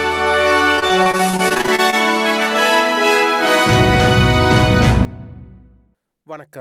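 From 0.75 s to 1.94 s there is repeated packet loss, giving a robotic sound. The stream drops fifteen short chunks, none longer than 26 ms. Each hole is bridged by stretching the sound just before it. About a quarter of the stretch is patched, so it turns choppy.

At 5.05 s a sudden gain jump hits. The level falls by about 17 dB in a single step, with no fade. The sound and the background noise drop together and stay low to the end. The likely cause is a gain change applied without a ramp.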